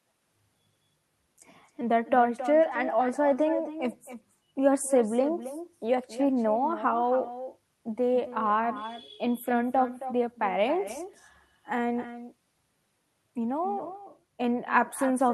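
From start to finish, every phrase of the speech is followed by a quieter, thinner repeat, about 12 dB down and around a third of a second late: echo with no canceller. The far end is playing the call through a loudspeaker, its microphone picks it up, and nothing subtracts it before it travels back. Unlike room reverberation, which smears into a continuous tail, this echo arrives as a distinct, delayed second copy.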